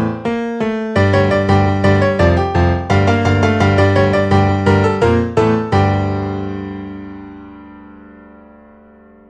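No technical faults can be heard anywhere in this recording.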